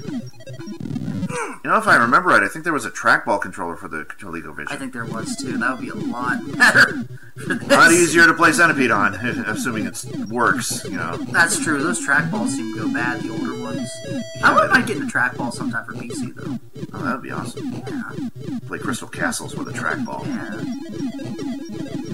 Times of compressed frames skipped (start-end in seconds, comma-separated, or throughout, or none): none